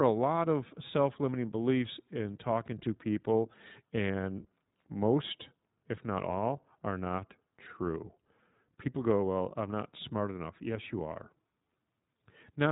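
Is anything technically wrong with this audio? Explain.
Yes. Throughout the speech, the sound is dull and boxy, with nothing above 3.8 kHz, and it has a plainly audible rough, synthetic edge. That is the iLBC codec, which codes each short frame's excitation independently of the one before, consistent with 20 ms frames at 15.2 kbps.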